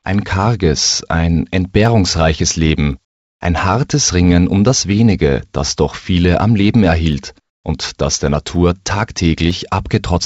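Single sharp clicks at 1.86, 2.93, 7.13, 8.55 and 9.51 s are dropped samples, a fraction of a millisecond likely lost from the stream. The waveform jumps straight to a later value, so each is a thin full-band line rather than an audible gap or stutter, as a longer dropout would give. From 7.40 to 7.64 s the faint background, about 61 dB below the loudest passages, gives way to comfort noise in place of the background for 240 ms, likely from the sender halting transmission while the receiver synthesises a stand-in. That stretch is steady, featureless and about 12 dB quieter, unlike a noise gate, which would leave true silence. The call codec path also limits the audio to nothing above 8 kHz.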